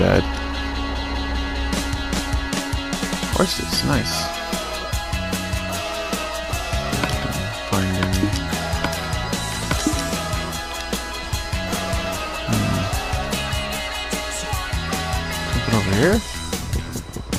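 No technical faults can be heard anywhere in the clip. No dropouts, clicks, distortion or timing problems interrupt the audio at any point.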